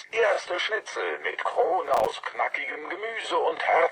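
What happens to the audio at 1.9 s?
At 1.9 s the audio is inside a burst of processor overload crackle running from about 1.87 to 2.13 s. The processor keeps missing its deadlines for very short buffers, a few milliseconds each, and each missed buffer drops out as a sliver of silence with hard edges. Around ten of these gaps stack into a gritty tearing over the sound. On a waveform this shows as scattered flat dropouts, and on a spectrogram as thin vertical broadband streaks.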